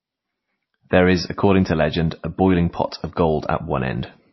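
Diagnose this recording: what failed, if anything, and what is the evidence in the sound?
The codec stage failed. The speech has nothing above 5.8 kHz from start to finish, and two different sets of compression artefacts are heard together. That points to transcoding between lossy codecs, likely a low-rate MP3 near 24 kbit/s re-encoded to WMA. The second encoder spent its bits on the first one's damage and kept its low cut-off.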